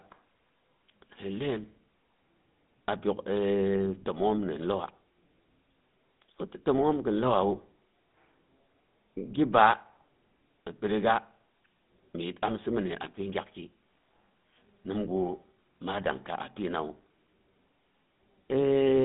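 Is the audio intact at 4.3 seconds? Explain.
No. At 4.3 seconds the speech carries GSM full-rate codec damage, present throughout the clip, and its sound fits the 13 kbps GSM full-rate codec. It models the vocal tract and drives it with a coarse, regularly spaced pulse excitation, so voices take on a plainly audible buzzy, gravelly roughness. On a spectrogram the band runs from about 150 Hz to 3.6 kHz, with nothing above 3.8 kHz.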